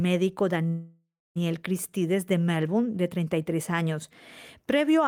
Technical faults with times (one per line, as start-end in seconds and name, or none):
0.67-1.38 call audio freeze